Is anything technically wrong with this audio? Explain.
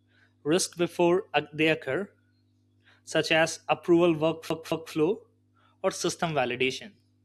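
Yes. From 4.49 to 4.93 s, just after "such as approval", the speech sticks like a CD stuck on one turn: a 219 ms segment repeats twice with brief mutes, as the laser jumps back each revolution.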